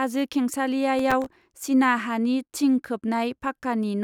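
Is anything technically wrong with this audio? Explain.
Yes. From 0.99 to 1.68 s, processor overload crackle: the processor repeatedly misses deadlines for very short buffers, around a millisecond and a half, leaving about twenty tiny silent gaps that tear through the speech as gritty crackle.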